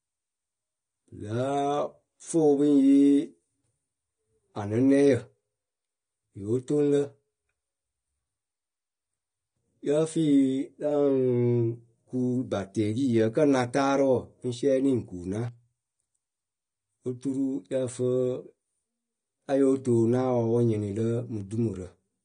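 From start to finish the speech sounds dull and smeared, with plainly audible AAC compression damage, likely from AAC-LC at a low bitrate near 32 kbps. On a spectrogram, all energy stops at a flat ceiling of 9.7 kHz, where the encoder discarded everything higher.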